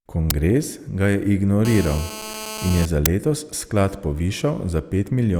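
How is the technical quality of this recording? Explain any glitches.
The recording has two kinds of fault: two brief digital bursts and a stretch of radio-frequency buzz.

At 0.30 s and again at 3.06 s there is a sharp, loud crack of harsh digital noise, about 5 ms long. This is an uninitialised buffer: a block of audio was sent to playback before anything had been written into it, so whatever stale data sat in that memory came out as samples. The length of each burst fits a 256-sample buffer.

From 1.65 s to 2.86 s a hard, raspy buzz at 217 Hz sits under the speech, rich in harmonics and about 11 dB below the signal. This is GSM phone buzz. A nearby 2G phone transmitting in pulses 217 times a second had its radio energy rectified by the audio circuitry, turning the pulse rate into an audible tone. The buzz holds steady throughout, which is the pattern of an active call.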